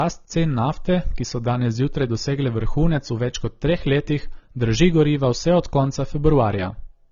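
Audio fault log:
throughout: low-bitrate audio saved at a high bitrate. Nothing reaches above 6.9 kHz, and the speech carries the artefacts of that heavy first encoding. The file's high MP3 rate should carry far more, so this is likely an earlier low-rate encode, consistent with something near 24 kbit/s AAC, later re-saved. What sets it apart from an ordinary low-bitrate file is that the container's generous bitrate cannot restore the band or detail the first codec removed.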